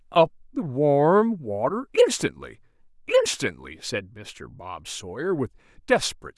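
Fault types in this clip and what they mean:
No technical faults can be heard in this speech recording. There is nothing here to list.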